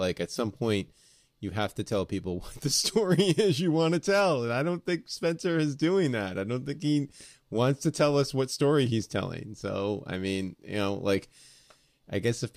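At 0.36 s, just before "point you have to", there's a corrupt frame decoded: one compressed frame arrived with flipped bits and the decoder played it anyway, scattering energy into wrong frequencies. It's quick and quiet, peaking around -35 dBFS.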